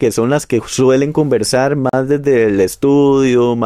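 At 1.89 s the sound drops out for about 40 ms, ending at 1.93 s, a gap between stream segments. The timestamps of two consecutive segments leave a small hole that the player fills with silence, inserting roughly 39 ms without removing any audio. On a waveform it appears as a flat, silent strip with abrupt edges; a spectrogram shows a clean vertical blank band across all frequencies, bordered by broadband clicks where the signal cuts off and resumes.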